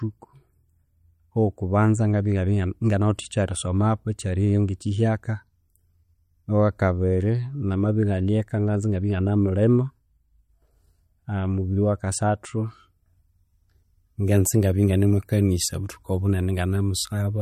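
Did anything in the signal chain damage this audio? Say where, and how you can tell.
Yes, at the codec stage, and it's there for the whole clip: nothing above 16.4 kHz, plus a watery, swirly quality on the speech with smeared consonant attacks. That's likely MP3 compression at a low bitrate, something like 48 kbps, dropping treble and flickering weak spectral lines.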